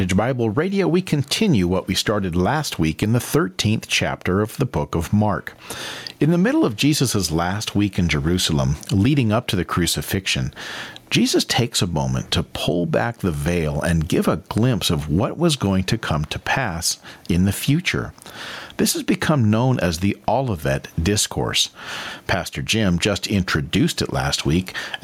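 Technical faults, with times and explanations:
Throughout, gain pumping: the level is pulled down each time the speech gets loud, a swing of roughly 15 dB. The cause is likely input gain set far too high with a fast limiter or compressor clamping down on each peak. Unlike a noise gate, which shuts the gaps to silence, this rides the gain down on loud sounds, and the speech itself sounds flattened and squashed.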